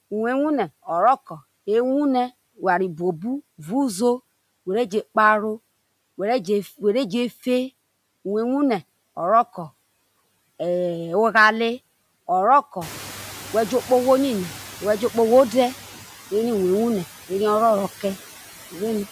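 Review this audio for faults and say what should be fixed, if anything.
Noise suppressor artifacts throughout: the suppressor lowers bands it judges to be steady noise by about 15 dB, frame by frame, so the background sinks between words and rises beneath them. Smoother gain changes across frames and a lower maximum reduction would make this less audible.

Noise suppressor catching up, 12.81 to 15.75 s: the room noise jumps by about 18 dB around 13 s, and the noise estimate lags behind it. At first only about 6 dB is removed, and the background fades down over 2.94 s as the estimate adapts. A faster-adapting noise tracker that reacts sooner to sustained level jumps would shorten this gap.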